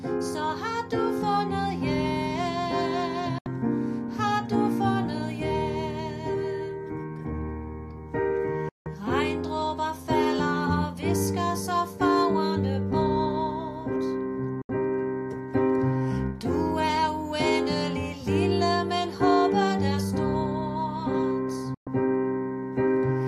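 Four digital broadcast dropouts, at 3.38–3.46, 8.69–8.86, 14.62–14.70 and 21.74–21.87 s. Each time the receiver mutes with a quick 3 ms fade and skips 72, 168, 72 and 120 ms of programme, gap sizes that fit whole 24 ms frames failing.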